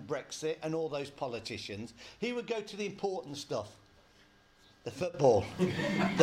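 A digital gain setting likely changed without a ramp at 5.14 s, a sudden gain jump: sound and background noise leap about 12 dB louder together until the end.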